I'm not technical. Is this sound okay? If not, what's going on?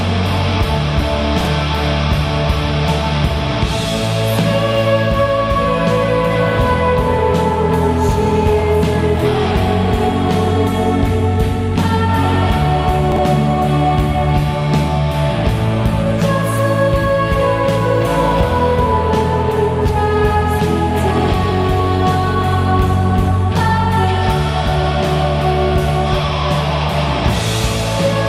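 No. There are two brief glitches, at about 1.41 to 1.47 seconds and again at 13.12 to 13.18 seconds. Both are chunks out of order. The sound travels in tiny pieces, each about 21 milliseconds long. At these moments, one piece showed up two places too late and played after pieces meant to follow it. Nothing is missing, but the order is scrambled. You hear a quick jumbled blip.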